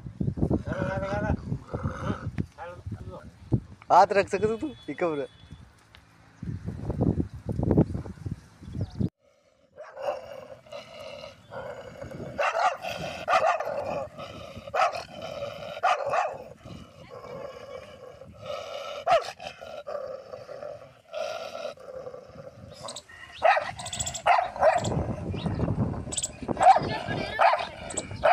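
At 2.8 to 3.2 s and again at 13.4 to 13.8 s, chunks play out of order. In each span, two 200 ms chunks swap places, one arriving a chunk late. Nothing is lost. The sound jumps backward briefly, with three hard joins.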